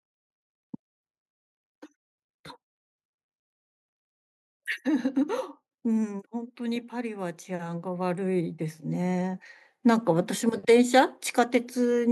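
Automatic gain rising affects this speech recording from 5.82 to 11.22 s: the gain control, treating the input as too quiet, steadily lifts its level by about 11 dB, so the voice and the background noise swell together across those five seconds.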